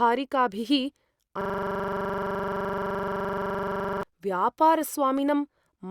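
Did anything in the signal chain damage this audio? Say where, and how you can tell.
Yes. A system hang loop at the driver or buffer stage: from 1.41 to 4.03 s the host stopped supplying new audio while the interface kept replaying the last ring-buffer contents. A 42.67 ms fragment of the speech repeats exactly, roughly 60 times, at 23.4 Hz, which fits a 2048-sample buffer. The result is a rapid, mechanical stutter with a buzzy edge. Normal speech resumes once the system recovers.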